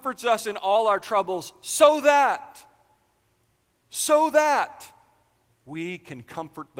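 Right after "us in", from about 0.75 to 1.84 s, the speech suddenly runs fast and sharp, sped up by roughly 5.9% and raised close to 99 cents, nearly a full semitone, before snapping back to normal. That's the signature of a drift correction step, most likely a clock-matching stage jumping its playback rate to rebalance its buffer. Underneath, the Opus coding is light.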